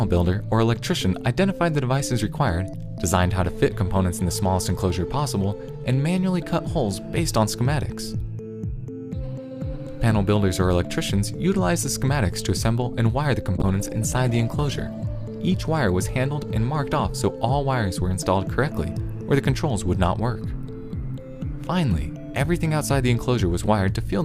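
At 13.58 s a call bitrate drop sets in. The call's bandwidth estimate fell, so the encoder had to work with far fewer bits. The sound turns coarse, and the top end is cut away. The change fits a fall from around 96 kbps to around 17 kbps. The lowest quality lasts about 1.47 s. By 15.11 s the bitrate has recovered and the sound clears again.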